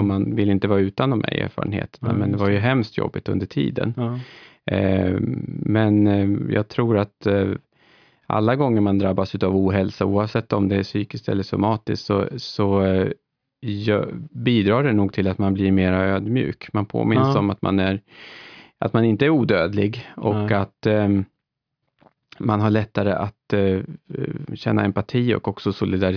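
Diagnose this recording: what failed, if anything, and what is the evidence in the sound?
Listening to the speech recording, nothing stood out that would point to a failure at any stage of the chain.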